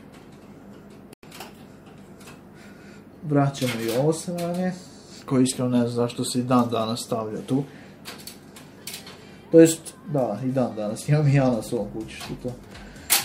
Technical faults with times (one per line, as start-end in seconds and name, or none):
1.13-1.23 digital broadcast dropout